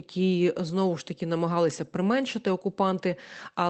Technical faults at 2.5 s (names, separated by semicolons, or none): none